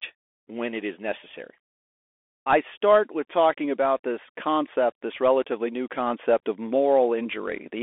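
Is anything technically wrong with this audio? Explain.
Yes. Throughout the speech there is a thin, boxy telephone tone: nothing reaches above about 3.8 kHz, the lows below 300 Hz are gone, and s sounds come out scratchy over a grainy hiss. This is the Bluetooth CVSD headset codec. It encodes each sample as a single up-or-down bit with an adapting step, which fits a 64 kbps headset link. Fast, loud high-frequency detail outruns that step and distorts, while the 300 Hz to 3.5 kHz passband gives the narrow sound.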